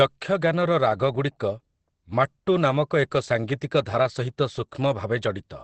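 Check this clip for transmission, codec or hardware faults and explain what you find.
One codec fault is present throughout the speech: likely Opus compression in its speech (SILK) mode at a low rate, consistent with about 12 kbps. It sounds muffled and hoarse, and a spectrogram shows a hard, flat ceiling with nothing above 8.5 kHz.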